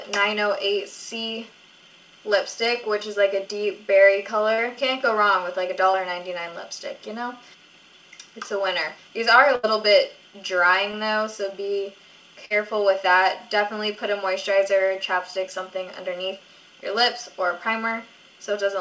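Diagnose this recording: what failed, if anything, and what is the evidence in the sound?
Short concealed packet loss occurred three times, at 4.54–4.60 s, 5.92–5.95 s and 10.91–10.95 s. This is a network-stage fault: packets arrived too late for the decoder, and the receiver filled the gaps by extending the preceding sound, either from its pitch or as shaped noise, before blending back in. Each gap is a brief smear, with about 40 ms, 20 ms and 20 ms of real audio missing. On a spectrogram, harmonics or noise bands are stretched smoothly over each gap rather than changing naturally.

A burst of packet loss, also at the network stage, occurs at 9.55–9.65 s and 12.45–12.57 s. The receiver had to cover longer gaps, filling about 78 ms and 49 ms with a continuation of the last sound that was turned down as it went on. This produces a held buzz or a fading hiss. The audio then picks up further along, with about 80 ms and 40 ms of content lost. 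On a waveform, a decaying, repetitive stretch comes before the audio resumes.

Throughout the clip, the call codec leaves nothing above 8 kHz. This is consistent with G.722 at 64 kbps.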